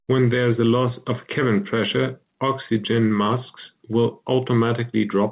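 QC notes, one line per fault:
No faults found; the speech has passed through a call path that leaves nothing above 4 kHz, consistent with narrowband G.711 A-law coding at 64 kbps.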